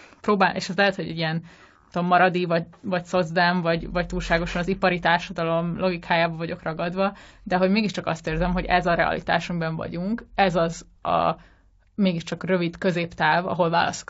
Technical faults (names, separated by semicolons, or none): low-delay AAC compression